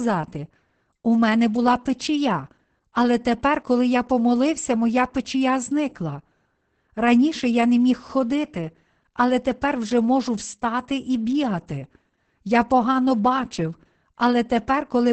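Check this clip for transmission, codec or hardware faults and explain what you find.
One fault runs through the whole speech clip: Opus voice compression with heavy codec damage. Nothing is present above about 8.7 kHz, which points to Opus in wideband SILK mode at a low bitrate, around 10 kbps. SILK models the voice with linear prediction and codes the excitation coarsely at this rate, so the speech sounds muffled, hoarse and slightly robotic, without the air and sibilant detail above the cut-off.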